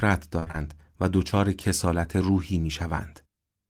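From 0.39 to 0.55 s the speech turns choppy and robotic: repeated packet loss, four short gaps up to 24 ms, each patched by stretching the previous sound.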